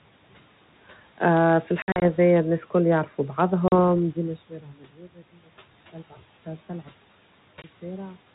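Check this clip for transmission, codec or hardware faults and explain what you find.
Two kinds of fault appear: packet loss on the ADPCM call, three times, and speech cut by the noise suppressor, once.

Packet loss on an ADPCM call, at 1.82 to 2.03 s (120 ms missing across 200 ms, runs up to 60 ms, around seven packets), 3.68 to 3.73 s (40 ms) and 7.62 to 7.70 s (20 ms): the lost packets are replaced by silence. The G.726 decoder's predictor and step size drift from the sender's, so hard-edged gaps are followed by brief distortion.

Speech cut by the noise suppressor, 4.50 to 5.22 s: the suppressor mistakes parts of the speech for noise and pulls them down by up to about 11 dB for about a third of a second, so those sounds come across faint and swallowed.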